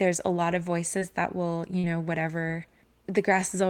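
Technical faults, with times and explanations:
0.99–1.03 s and 1.79–1.85 s, short concealed packet loss: Just after "a lot of" there is a brief smear, and just after "that will you" a longer wobble. About 20 ms and then about 40 ms of the speech arrived too late for the decoder. The receiver covered each gap by extending the preceding sound, pitched where voiced and as shaped noise where not, for about 16 ms and 44 ms, before blending back into the real signal.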